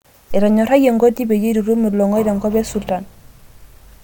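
No audible technical fault turns up anywhere in this speech recording.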